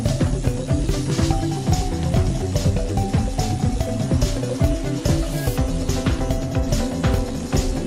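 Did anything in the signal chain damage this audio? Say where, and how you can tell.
No, none of the stages it passed through left any audible damage on the signal.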